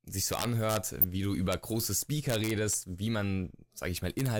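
Speech, hit by integer overflow at 0.33–0.77 s (ending just before "wie du"), 1.52 s (just after "wie du"), 2.30–2.74 s and 4.19–4.26 s. Peaks pushed about 1 dB or less past full scale wrap to the opposite sign, so they crack violently instead of flattening into clipping's duller buzz. DAB burbling at 1.01–1.04 s, right before "wie du", is a brief patch of a few watery blips. It fits two MP2 frames in which a small fraction of corrupted bits slipped past error correction and put short blips of noise into single sub-bands. That sounds watery, unlike a dropout's silence or a click's single spike.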